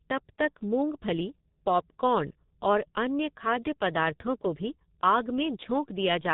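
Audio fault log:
throughout, G.723.1 codec: the speech is heavily muffled and hoarse, with consonants smeared into one another, because everything above 4 kHz is gone and the codec rebuilds the voice from a coarse model refreshed only every 30 ms frame. The grainy roughness points to a rate around 6.3 kbit/s. Unlike a plain low-pass filter, which dulls the sound but keeps it smooth, this adds a buzzy, synthetic texture that lags behind quick changes.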